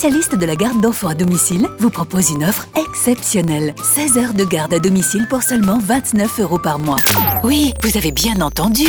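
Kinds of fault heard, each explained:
Filter restarted on every block: a filter in the processing chain discards its internal memory at each block boundary and starts again from silence. Each block therefore opens with a brief transient before the filter settles. Here those transients fall 25 times a second, which means blocks about 40 ms long. The result is a steady 25 Hz buzz running through the whole audio, rising and falling with the level of the sound.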